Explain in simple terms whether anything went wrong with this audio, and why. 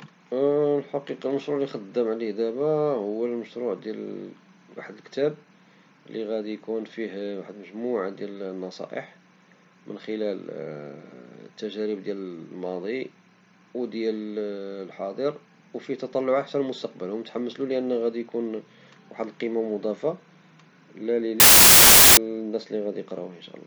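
From 21.4 to 22.17 s the speech turns into loud hiss: samples built from the wrong bytes, so each sample's tiny noisy details got read as its main value.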